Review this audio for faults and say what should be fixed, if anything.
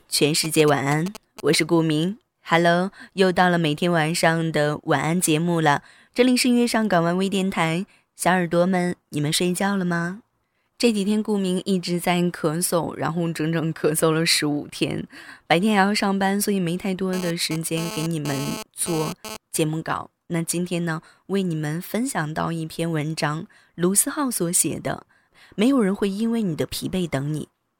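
GSM signalling bursts from 0.44 to 1.55 s: a galloping pattern of brief 217 Hz buzzes, roughly 10 dB below the speech, from a nearby phone's radio bursts being rectified in the audio circuit.

GSM phone buzz from 17.13 to 19.37 s: a raspy, harmonic-rich 217 Hz buzz, about 11 dB below the speech, that comes and goes as a nearby phone transfers data and the circuit rectifies its pulses.

To prevent both, keep mobile phones well away from the recording chain or in airplane mode, and use shielded cabling with RF-filtered inputs.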